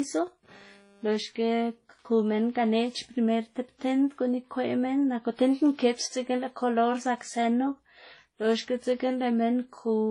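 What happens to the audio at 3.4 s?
At 3.4 s the speech carries the same degradation heard throughout: nothing above about 11.3 kHz, with two distinct layers of coding damage. This is most likely transcoding between lossy codecs. The character fits an early WMA-style encode at a low bitrate, around 32 kbit/s, re-encoded to HE-AAC at a similar rate. The second encoder spends its limited bits reproducing the first encoder's artefacts, then adds its own. Unlike a single low-bitrate encode, which gives one consistent artefact signature, here two different kinds of grit sit on top of each other, and the 11.3 kHz ceiling inherited from the chain stays fixed.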